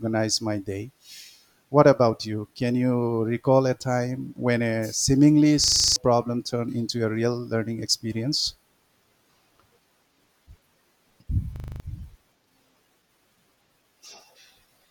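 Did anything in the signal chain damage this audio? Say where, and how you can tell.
Yes. A system hang loop at the driver/buffer stage replays one 40 ms buffer, heard as a 25 Hz buzz at 5.64–5.96 s (after "time when a seemingly") and 11.56–11.8 s, swallowing roughly 300 ms and 200 ms of speech.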